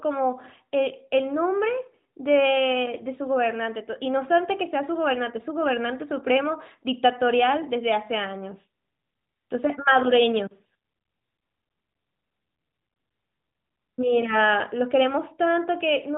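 No faults found in this speech; the narrowband mobile-codec band limit at 4 kHz is present as expected and introduces no dropouts, glitches or level problems.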